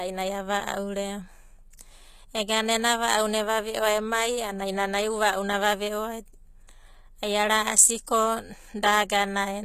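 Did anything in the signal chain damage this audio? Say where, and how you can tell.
Yes, at the codec: the speech has gritty, lispy sibilants and nothing above 14.9 kHz throughout, which fits likely HE-AAC compression at a low bitrate around 20 kbps, with the treble rebuilt from lower bands.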